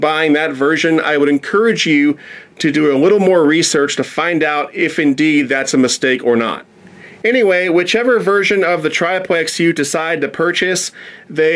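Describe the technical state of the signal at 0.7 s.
At 0.7 s the signal is intact, with no fault audible at that moment.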